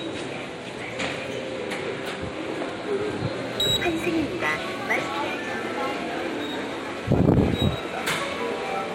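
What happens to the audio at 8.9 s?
At 8.9 s the sound still carries crude rate conversion, running from 3.43 s to the end. Samples are repeated without filtering, which fits a 44.1 to 48 kHz change. A gritty, inharmonic fizz sits roughly 25 dB below the sound.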